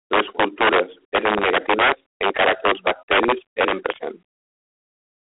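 Integer overflow runs through the whole clip, from the start. The speech was driven about 8 dB past the largest value the integer format can hold, and instead of being limited, the peaks wrapped around to the opposite sign. A few percent of samples cross that limit, each one flipping across the full range. Rather than the flattened tops of clipping, the loudest syllables break into violent, sharp cracks.

G.726 ADPCM coding also covers the entire clip, at 24 kbit/s. The codec stores each sample as a few bits of difference from an adaptive prediction, and at this rate the coarse steps leave plainly audible damage. A harsh, rasping hiss rides on the speech and rises and falls with its level. The sound is confined to a telephone band of roughly 300 Hz to 3.4 kHz, with nothing at all above 3.8 kHz, giving a narrow, muffled top end.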